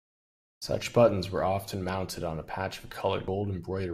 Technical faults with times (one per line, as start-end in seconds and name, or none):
3.27 CD skip